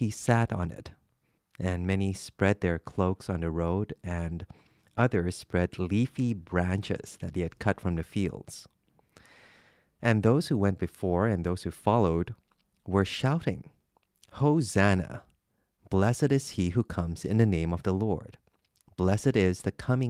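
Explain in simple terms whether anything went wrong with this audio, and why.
Nothing went wrong with this audio, as no fault can be heard anywhere in it.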